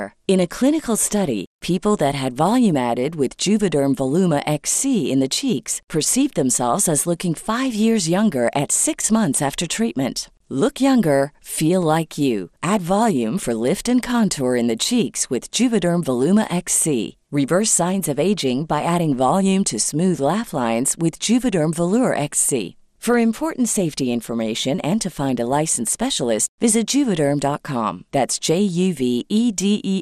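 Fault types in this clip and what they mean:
MP2 compression: The speech sounds dull and carries a gurgling, granular roughness for the whole clip, which points to MPEG Layer II coding at a low rate, likely around 80 kbps. Starved of bits, the coder switches upper sub-bands off and on and quantises the rest coarsely. A plain low-pass filter removes the top smoothly and steadily, but here the highs flicker unevenly and the remaining bands are coarse.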